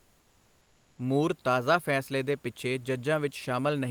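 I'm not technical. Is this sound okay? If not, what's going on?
No, not quite. For the first second, up to about 0.97 s, the real room noise is replaced by comfort noise in place of the background: a smooth, featureless hiss. Likely the call system paused sending during the silence, and your end filled the gap with made-up noise.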